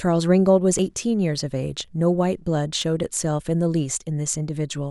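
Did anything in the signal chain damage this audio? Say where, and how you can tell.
Yes. At 0.79 s, 1.85 s and 2.82 s the speech jumps abruptly with no gap of silence. The first jump drops roughly 30 ms and the other two about 10 ms each. This points to a driver or buffer stage, most likely a dropped buffer (overrun): the capture software failed to collect blocks before the hardware overwrote them, so the remaining audio on either side is butted straight together.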